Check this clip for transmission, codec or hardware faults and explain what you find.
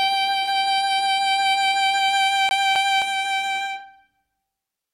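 One fault is present in this music clip: a CD stuck on one turn, from 2.49 to 3.02 s. A scratch keeps knocking the laser back a track at the same point on each rotation, so the player rereads the same stretch of disc. Here a 264 ms slice of the music plays twice in succession, with a brief mute at each jump back, giving the quick, regular stutter of a skipping CD before playback moves on.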